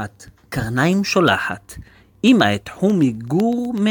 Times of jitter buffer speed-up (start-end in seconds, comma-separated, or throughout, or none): none